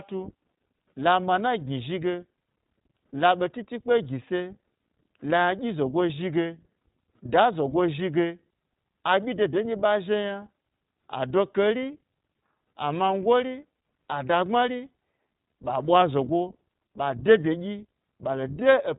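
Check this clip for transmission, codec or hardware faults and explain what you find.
One fault runs through the whole recording: iLBC codec damage. Throughout, the speech sounds plainly rough and slightly synthetic, with nothing above 3.8 kHz. iLBC is a narrowband codec that codes each frame's excitation independently, without drawing on the previous frame. The texture fits its 20 ms, 15.2 kbps mode.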